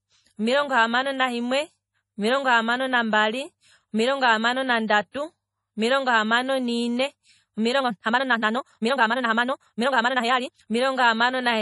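Heavy lossy encoding, likely MP3 compression at a starved bitrate in the region of 32 kbps, has zeroed weak frequency lines that flicker between frames, so this speech sounds watery and swirly throughout, with smeared consonant attacks. Because the codec spreads quantisation noise across each transform block, two sharp attacks just after "omilongo hamano" carry pre-echo: a brief hiss precedes them at 4.88–4.90 s (about 20 ms) and 5.12–5.14 s (about 28 ms), softening each onset. From 7.77 to 10.67 s the audio plays at roughly double speed (1.99×) with unchanged pitch, likely a time-stretched section where software dropped short pieces to compress duration, leaving that stretch rushed and abruptly faster than the surrounding speech.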